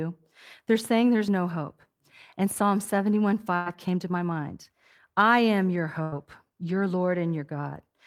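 The clip is speech. At 1.28 s there is a sudden jump in the sound. This is likely a dropped buffer (overrun). Roughly 30 ms of audio was overwritten before it could be read, so the two sides join with no gap. Two bursts of packet loss follow, at 3.55 to 3.69 s and 6.02 to 6.15 s. In each, the last sound is stretched and faded for about 100 ms. Then the speech resumes past a missing 60 ms stretch.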